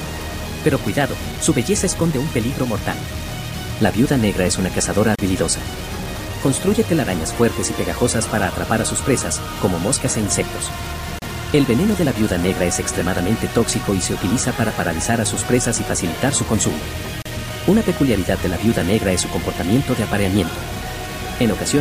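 From the start, everything sounds grainy, with distortion that tracks the sound and only sits about 15 dB down. That's likely low bit depth without dither, roughly a 5-bit grid. Then at 5.15, 11.19 and 17.22 s, every six seconds, there's a gap at a join of encoded pieces: a break of about 33–34 ms where padding from separately encoded chunks stayed in.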